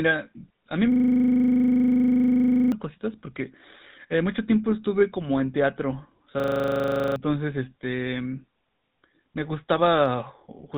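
GSM full-rate codec damage runs through the whole speech clip and is plainly audible: a buzzy, gravelly roughness with nothing above 4 kHz. The codec models the vocal tract and rebuilds the excitation from sparse, regularly spaced pulses, which is consistent with the 13 kbps full-rate coder.

A system hang loop runs from 0.92 to 2.72 s, and again from 6.4 to 7.16 s. Each time the computer froze while the audio hardware kept replaying the same 40 ms ring buffer, giving a steady buzz at 25 Hz. The first loop, about 45 repeats, replaces roughly two seconds of speech. The second, about 19 repeats, replaces under a second.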